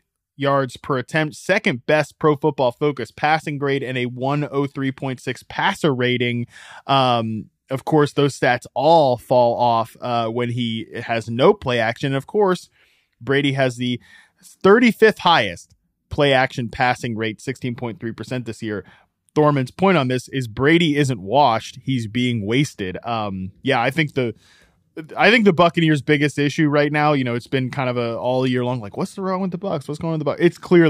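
No technical fault can be heard anywhere in this speech clip.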